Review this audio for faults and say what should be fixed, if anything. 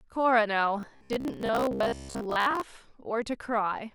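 From 0.80 s to 2.63 s the speech collapses into a stiff, metallic buzz at about 66.7 Hz. That's robotic sound from repeated short buffers: it still tracks the words loosely. A 66.7 Hz drone means a 15 ms chunk looping, which likely comes from audio arriving too slowly, so the playback side keeps reusing the last buffer while fresh audio gets dropped. Roughly half of what you hear there is repetition. To prevent it, give the input path more buffering headroom or fix whatever is starving the stream so it keeps up in real time.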